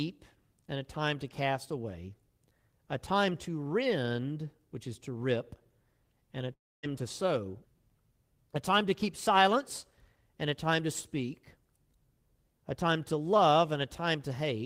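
At 6.53 s the stream most likely suffered a long network dropout: packets stopped arriving for about 0.3 s, and roughly 300 ms of audio was never played. The receiver filled the hole by extending the last received sound, which becomes a brief buzzy smear that decays toward silence or a faint steady noise. At 6.85 s the audio resumes abruptly, jumping ahead with the lost stretch simply absent.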